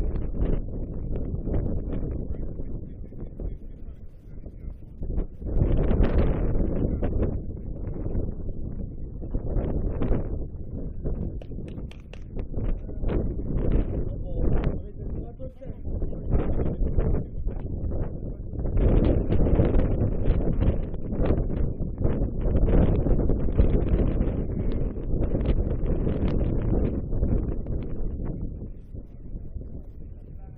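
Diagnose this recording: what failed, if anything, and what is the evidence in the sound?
No failure detected anywhere.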